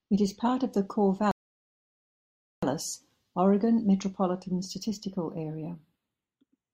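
Throughout, the channels drift apart. Their clocks differ by around 30 ppm, so the delay creeps to roughly 0.1 ms and mono notches sweep slowly, unlike a fixed offset.

From 1.31 to 2.63 s, a rebuffering stall cuts the speech to silence. It resumes exactly where it stopped, adding about 1.3 s without losing anything, unlike a dropout.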